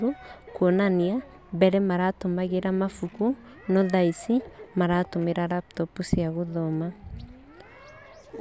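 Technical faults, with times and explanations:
No technical problems turn up anywhere in this recording, so there's nothing here to flag.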